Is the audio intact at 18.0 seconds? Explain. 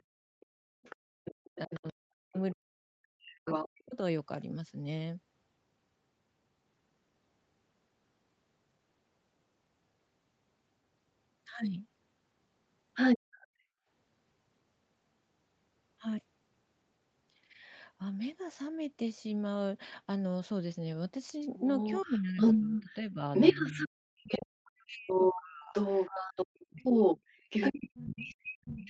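Yes, the audio at 18.0 seconds is intact, with no dropout, glitch or other fault.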